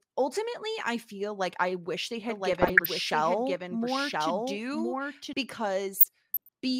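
A speech recording carries two faults. From 2.29 to 5.33 s there is a doubled audio track: a second full-band copy of the speech runs roughly a second behind, about 5 dB quieter. It is most likely caused by the signal being captured again through a slower path or by an edit leaving two copies overlapping. It is not room echo or reverb, because the copy has no decay tail and no room colouring, and it cuts in and out abruptly at both ends. DAB burbling appears from 2.53 to 2.86 s and again from 5.94 to 6.49 s as short blips of noise over the speech. Under weak reception, bit errors slip past the error correction into the MP2 data, so wrong samples put short blips of noise into single sub-bands. The second burst is longer, which suggests 26 damaged frames. Unlike packet-loss dropouts, the sound never falls silent or repeats.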